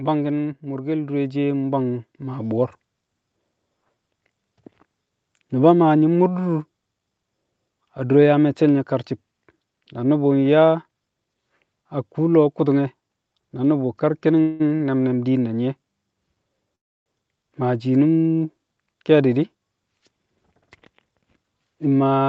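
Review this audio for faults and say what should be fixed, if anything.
The automatic gain control judged the speech input too quiet and raised its gain by about 9 dB, gradually, between 0.61 and 2.61 s. This automatic gain rising makes the voice and the background noise swell together over those two seconds, so the opening sounds like it is fading in instead of starting at a steady level. To prevent it, start the gain control at a sensible level or let it settle before the call begins.

A call audio freeze happens twice, each likely caused by packets held up in transit so that the jitter buffer ran dry. From 14.41 to 14.62 s the receiver stretched the last sound for about 184 ms, which is heard as a fading buzz before the speech resumes where it stopped. From 16.75 to 17.08 s the wait was longer, 306 ms, and nearly all of it is silence. Nothing is lost, but the speech gains a pause each time. 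A more stable network path, or a jitter buffer that holds a little more audio in reserve, would prevent it.

A short stall from a late packet follows at 14.76 s, lasting 38 ms. One packet was missing when it was due, so the receiver held the current sound until it arrived and then carried on from the same point. Nothing is dropped, but one sound lingers slightly too long with a faint buzzy dip, adding 38 ms of delay. Reducing network jitter, or letting the buffer keep a small margin, would prevent it.

A jitter buffer speed-up runs from 20.62 to 21.66 s. Delayed audio had built up in the buffer, and the receiver cut it back by removing many short pitch-period slices, about a tenth of a second in total. The speech plays at roughly 110% speed at its normal pitch and sounds noticeably hurried for that second. Preventing the earlier delays would avoid this, as would a slower catch-up rate spread over a longer stretch.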